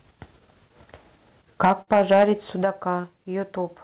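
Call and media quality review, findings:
Microphone overload, 1.64 to 2.24 s. Harsh crackle on the loudest syllables, peaks about 8 dB past full scale, flat-topped on around one sample in twenty. Likely mic input gain set too high at the converter. Distortion rides with loudness rather than appearing as dropouts, unlike the packet faults.

Microphone volume stepped down, 1.65 s and 2.63 s. Sudden level drop, about 3 dB then about 6 dB, speech and background falling together. Likely the client's automatic gain control cutting device input after clipping. Step is instant and lasting, not a fade.

Burst of packet loss, 1.82 to 1.90 s, inside the overloaded stretch. About 50 ms of the last sound extended and decaying, then 60 ms of audio gone; playback resumes further on. Jitter buffer and decoder concealment across consecutive lost packets. The sound skips ahead, so it is not clipping.

Short concealed packet loss, 3.01 to 3.12 s. 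Brief smear, 24 ms synthesized over a 30 ms hole, net about 10 ms of extra length. Decoder concealment, then blended back. Too short to be heard as a skip, unlike the 1.82 s burst. G.711 mu-law band-limited at 4 kHz throughout.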